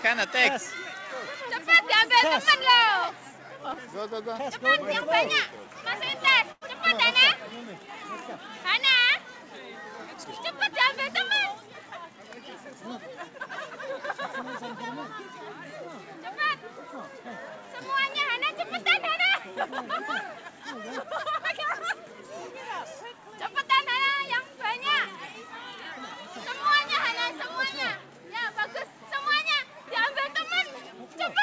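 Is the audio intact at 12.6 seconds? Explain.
Yes, the audio is intact at 12.6 seconds: nothing breaks up there, and the only things to hear are the call path's usual coding noise and band limit, with no content above 8 kHz, which fits a wideband call codec.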